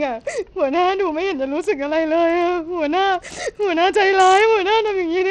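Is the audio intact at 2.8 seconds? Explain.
No, at 2.8 s you're hearing what's likely Bluetooth SBC compression, and it runs through the whole clip. It's starved of bits, which fits a low rate around 80 kbps, so the treble flickers and gritty quantisation noise rides on the speech, with nothing above 18.5 kHz.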